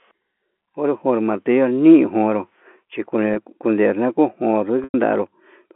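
Speech over G.711 telephone coding, with packet loss with pitch repetition at 3.34–3.36 s, just after "jo'ó martillo niujonró chikue", heard as a brief buzzy hold, and at 4.84–4.94 s, where a 100 ms gap fades toward silence. A plain dropout would go silent at once, but here the repeated pitch period carries the tone through before it decays.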